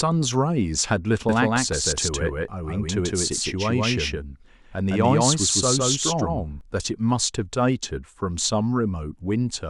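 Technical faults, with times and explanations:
1.29 to 6.61 s, doubled audio track: a second, full-band copy of the speech runs roughly 150 ms behind the original at about the same loudness. It gives a hard slapback echo with no decay or room colour. The copy cuts in abruptly at 1.29 s and drops out just as suddenly at 6.61 s. That sharp on-off behaviour points to an edit or routing fault rather than acoustics, likely a second, slower capture path mixed in alongside the direct one.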